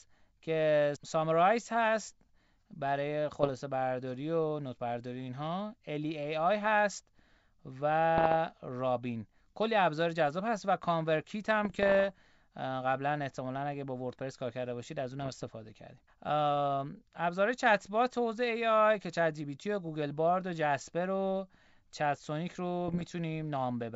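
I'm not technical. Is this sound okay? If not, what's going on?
No. There are bit errors on an ADPCM link, like a cordless phone call. A few bits got scrambled, and the decoder stays confused briefly. You hear pops and rough bursts at 3.32–3.51, 8.18–8.36, 11.64–12.15, 15.19–15.45 and 22.88–23.12 seconds.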